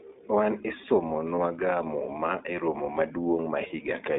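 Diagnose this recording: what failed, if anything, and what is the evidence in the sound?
The codec stage is at fault: the whole clip of speech passes through the iLBC codec, and the damage is plainly audible. The speech has a slightly rough, synthetic edge, and nothing survives outside roughly 250 Hz to 3.6 kHz. On a spectrogram, the energy stops in a hard ceiling near 3.6 kHz with a thin floor below 250 Hz. The sound points to iLBC's 20 ms frame mode at around 15.2 kbps, where each frame's excitation is coded independently.

The network stage has also failed: lost iLBC frames appear at 1.36 to 1.39 s and at 3.68 to 3.72 s, each about one 20 ms frame. At each gap the decoder repeats the last pitch cycle blended with noise, so you hear a brief, slightly buzzy held vowel. The waveform shows a short run of near-identical periods, and the spectrogram shows flat harmonics. Because iLBC frames stand alone, the speech recovers almost immediately afterwards.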